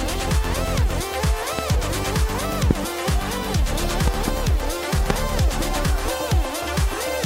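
Loud pops strike at 1.59 to 1.61 s, 2.71 to 2.73 s and 5.10 to 5.12 s. A double pop falls between 4.08 and 4.30 s. Each peaks about 15 to 20 dB above the sound, which continues underneath. A sudden voltage spike is the likely cause.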